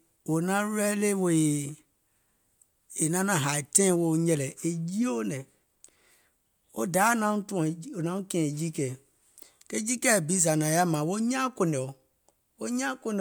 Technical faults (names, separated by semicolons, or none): none